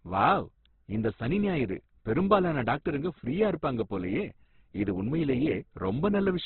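Throughout, the speech is cut off above 4.2 kHz and sounds grainy and rough rather than swirly, likely heavy Opus compression at a very low bitrate, around 12 kbps.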